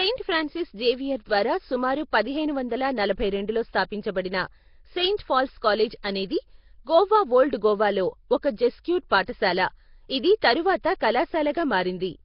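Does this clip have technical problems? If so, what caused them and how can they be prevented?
Yes. Nellymoser compression runs throughout: the speech is rough, hissy and smeared, with nothing above 5.3 kHz, likely from heavily starved Nellymoser Asao coding at a low bitrate near 22 kbps. Prevent it by recording with a modern codec such as Opus at a higher bitrate.

Pre-echo appears at 5.17 to 5.19 s just before "పాల్స్ కాలేజ్ అనేది గోవా", at 6.03 s between "పాల్స్ కాలేజ్" and "అనేది గోవా ఓల్డ్ గోవాలో", at 9.09 to 9.12 s, 9.26 to 9.28 s and 11.00 s. Each is a brief hiss of 11 to 25 ms smeared ahead of a sharp onset, as block-wide quantisation noise leaks before the attack. Prevent it with a codec that switches to short blocks on transients, or with more bits.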